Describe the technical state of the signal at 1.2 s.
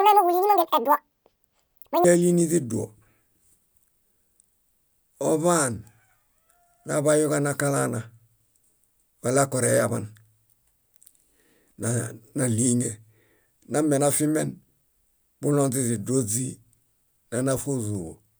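At 1.2 s the speech is a section at the wrong speed, running from 0.0 to 2.04 s at double speed. Pitch jumps about ten semitones, sounding high and hurried. A mismatched playback clock is the likely cause.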